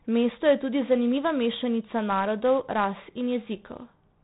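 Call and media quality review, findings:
4-bit ADPCM compression, throughout: heavy gritty hiss riding on every loud syllable, smeared attacks, nothing above 3.8 kHz. Sound points to a 4-bit codec at about 32 kbps, 8 kHz sampling. Unlike plain hiss, the noise tracks signal level and vanishes in pauses.

Loudspeaker feedback squeal, 1.63 to 3.57 s, starting right after "je tudi zanimiva": single 4.8 kHz tone swelling over roughly 1.5 s to about 15 dB above the speech. Mic-to-speaker loop gain exceeding one. Unlike a steady interference tone, it grows by itself until the loop breaks.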